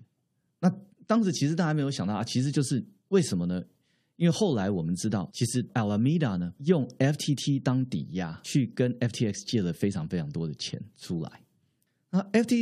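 No technical faults detected.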